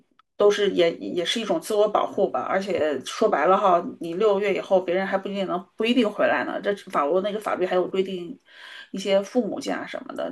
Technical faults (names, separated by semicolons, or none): corrupt frame decoded; corrupt frame concealed